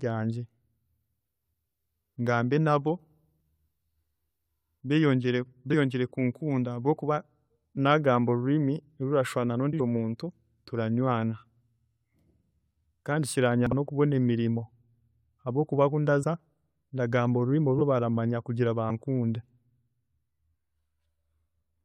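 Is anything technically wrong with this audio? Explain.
Yes. This speech has compressed frames skipped, at 3.36–3.45, 5.70–5.75, 9.72–9.82, 13.67–13.73, 16.22 and 17.78–17.81 s. At each point the decoder never plays some whole frames, so the speech leaps forward by roughly 50 to 100 ms. A dropout would leave a silent gap and a splice error would give a sharp click, but here nothing goes quiet and the material simply jumps ahead.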